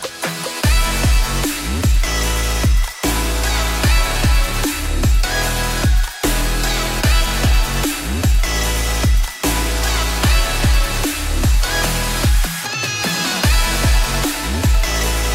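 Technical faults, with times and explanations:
No technical faults can be heard anywhere in the recording.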